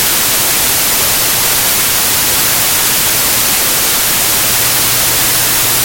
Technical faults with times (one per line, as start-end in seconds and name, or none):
0.00-5.84 wrong sample width